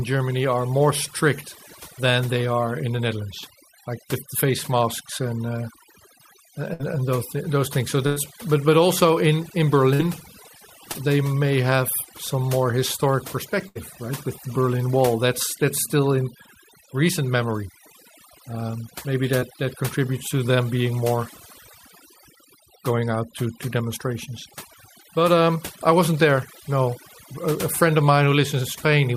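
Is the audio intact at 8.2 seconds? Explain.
No. Right around 8.2 seconds you're landing on the tail of a burst of packet loss running from about 8.07 to 8.18 s. The receiver didn't get roughly 100 ms of audio in time, so it stretched the last bit of speech it had and faded it down over about 95 ms, giving a brief held buzz or dwindling hiss. Then the speech picks up again further along, with the lost stretch simply skipped.

On top of that, there's overdone noise removal across the whole clip, 8.2 s included. The noise reduction was cranked too hard, so any frequency band sitting near its noise estimate gets pushed way down or switched off, taking the softer parts of the speech with it. You hear near-silent gaps with little twinkling specks in the background.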